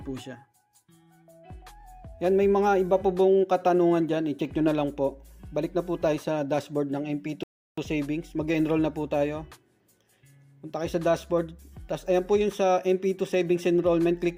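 At 7.43 s the audio just drops out to silence and sits there until 7.78 s, then picks up exactly where it left off. That's a rebuffering stall: the player burned through what it had downloaded and had to wait for more data before carrying on. Nothing gets skipped or garbled, you just get about 0.34 s of dead air inserted, so everything after it lands a bit later than it should.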